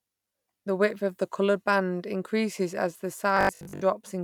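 After "band increases as the", Bluetooth stutter from 3.37 to 3.82 s: lost packets make the receiver loop short slices, buzzing over about 305 ms of missing audio.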